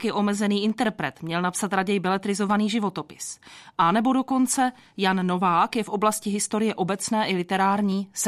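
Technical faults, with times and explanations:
0.70–7.92 s, clock drift buffer slips: from just after "je omezený", a click recurs every 0.90 s, about ten times, likely from two clocks differing by roughly 200 ppm, dropping or repeating a few samples. Each click is a thin vertical broadband line and a waveform step.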